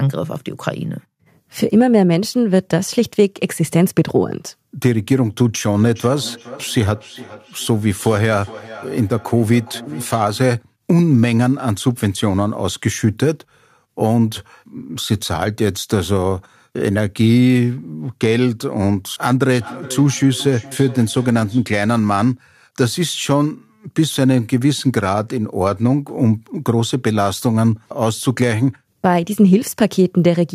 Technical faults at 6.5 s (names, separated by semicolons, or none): feedback echo between two devices